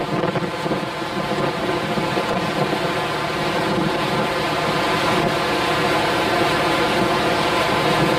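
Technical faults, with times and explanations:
Throughout, channel delay (comb filtering): one channel trails the other by around 5 ms, so summing to mono cancels shared content near 100 Hz and at evenly spaced notches above. The sound is hollow and phasey, and a spectrogram shows fixed dark horizontal bands.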